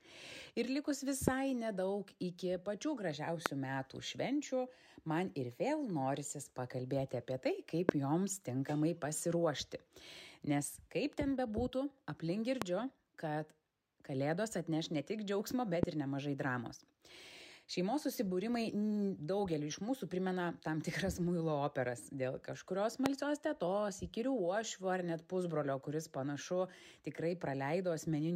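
A loud pop, a single sharp thump lasting about 22 ms and standing far above the surrounding level, strikes at 1.28, 3.46, 7.89, 12.62, 15.83 (slightly softer) and 23.06 s. Each is likely a voltage spike from a plug, switch or static. Unlike a dropout, the sound carries on underneath.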